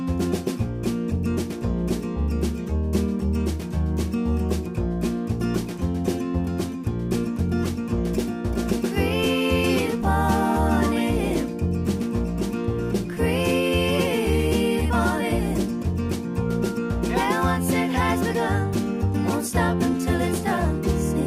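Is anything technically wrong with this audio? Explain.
No, nothing technically wrong is audible anywhere in the clip.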